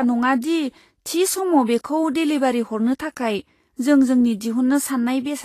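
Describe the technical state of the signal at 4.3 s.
At 4.3 s the speech carries what is likely Vorbis compression, present across the whole clip rather than starting there. The treble sounds hissy and grainy, with nothing above 14.1 kHz, which fits a low bitrate of around 33 kbps. At that rate the encoder keeps a smooth spectral outline but quantises the high-frequency detail so coarsely that it turns into noise of similar energy, roughening tonal parts and smearing onsets.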